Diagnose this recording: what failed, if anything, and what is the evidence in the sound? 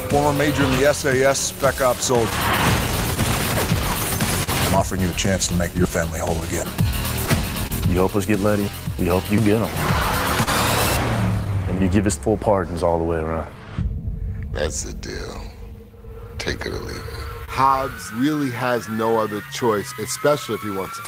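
Clock drift between sender and receiver, at the network jitter buffer: the sender's clock runs roughly 3% slow, so the buffer keeps draining. Uneven hiccups recur throughout, visible as irregular discontinuities in the waveform.

Repeated timing corrections, at the receiver buffer, from 0.88 s to 21.01 s: short pieces are repeated, slowing playback to 98% and adding roughly 400 ms. The waveform shows duplicated cycles spliced in.

Scattered short gaps, on the network path: about seven from 1.19 s to 4.49 s, the longest around 40 ms, and about three from 6.40 s to 7.72 s, up to about 30 ms. Concealment continues the last sound, leaving brief smeared patches on a spectrogram.

Short stall from a late packet, at the jitter buffer: the last sound is stretched for 36 ms at 10.43 s and for 29 ms at 17.45 s. Each shows on a spectrogram as a flat, frozen band.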